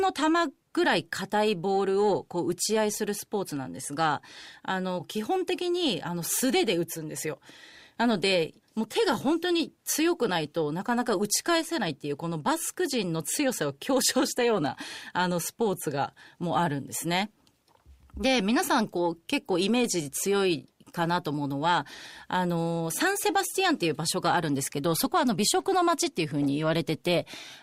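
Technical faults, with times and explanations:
No technical faults turn up in this speech recording, so there are no times or explanations to give.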